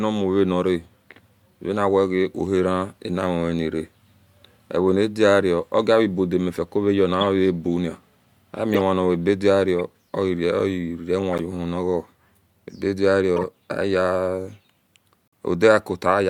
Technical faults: corrupt frame decoded

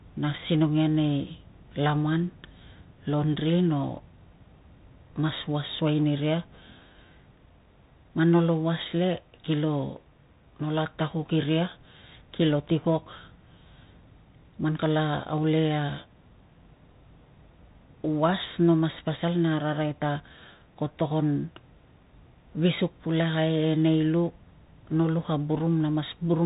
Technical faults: Bluetooth CVSD headset codec

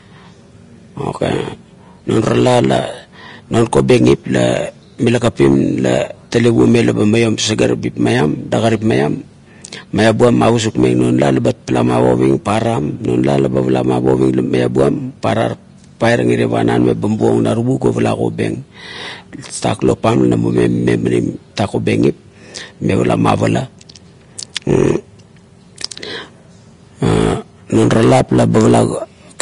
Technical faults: Vorbis compression

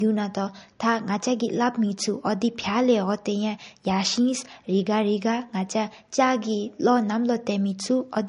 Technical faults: low-bitrate audio saved at a high bitrate

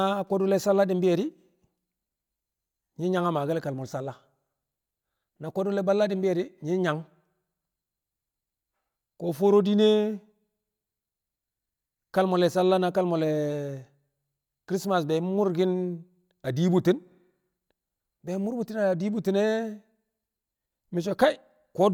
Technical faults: none

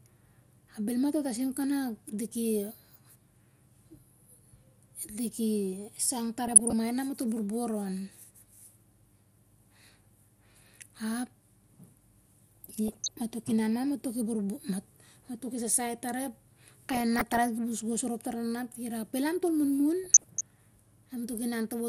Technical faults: MP2 compression; DAB burbling

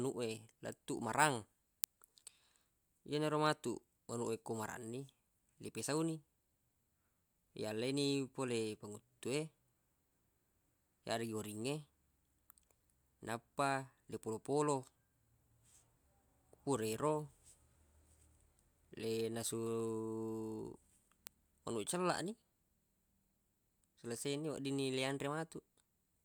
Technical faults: word clock ticks

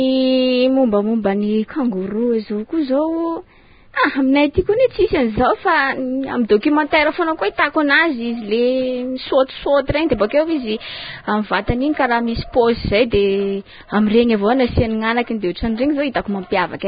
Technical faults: Vorbis compression

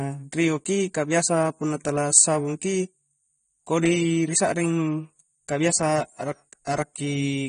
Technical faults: AAC compression

